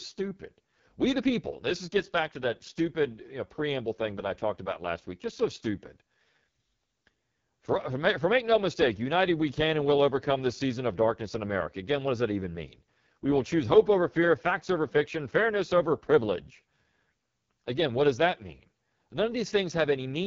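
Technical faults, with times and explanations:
Throughout, AMR wideband (HD Voice) codec: the speech sounds rough and raspy, with the coarse, buzzy grain of heavy codec damage. This points to the codec's lowest rate, around 6.6 kbit/s, where a pulse-driven vocal tract model gets too few bits to describe each frame. On a spectrogram, harmonics look smeared and blotchy, the top band turns into diffuse noise, and nothing appears above about 7.1 kHz.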